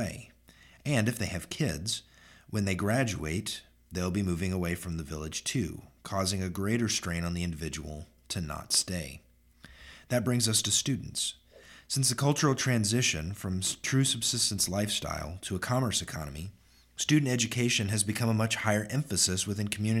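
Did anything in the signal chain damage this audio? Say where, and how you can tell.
No, nothing stood out on listening that would point to damage at any stage of the signal chain.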